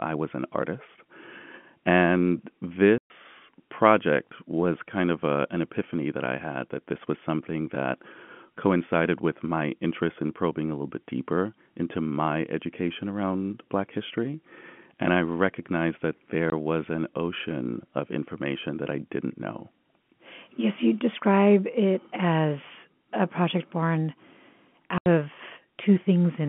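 At 2.98 to 3.10 s, 16.50 to 16.52 s and 24.98 to 25.06 s, the telephone-band speech drops into dead silence for 120, 20 and 80 ms. This is packet loss filled with silence, which fits 20 ms packets going missing. It shows as flat waveform gaps and blank spectrogram columns with hard edges.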